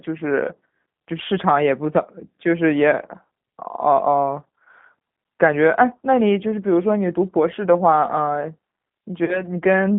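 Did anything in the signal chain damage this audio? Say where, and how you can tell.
Yes. Throughout, the G.729 codec at 8 kbit/s has plainly audible damage: speech is confined to roughly 150 Hz to 3.6 kHz and sounds rough and synthetic. A plain telephone band-limit would only dull the sound; here the rebuilt pulse excitation adds a grainy, artificial texture.

At 9.25 to 9.45 s there is VoIP packet loss concealed by the speech codec. About 30 ms of audio is missing, which fits a single lost packet. There is no silent gap, as a simple dropout would leave. Instead the decoder extrapolates from its last pitch and filter into a fading sound, and the speech stays weak or distorted for a while after audio returns.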